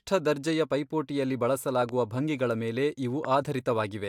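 At 1.82 to 1.91 s there's a loud pop, actually two quick ones, and another single pop at 3.25 to 3.27 s, each jumping around 10 dB above the speech, which carries on underneath. That's likely a voltage spike from a plug, switch or static hitting the signal path.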